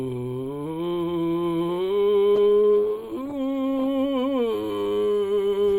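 From 2.36 s to 3.95 s the music turns rough and muffled: a call bitrate drop. Starved of bits, fitting a fall from 64 to 15 kbps, the encoder codes coarsely and trims the highs. Unlike packet loss, nothing cuts out; fidelity sags, then recovers.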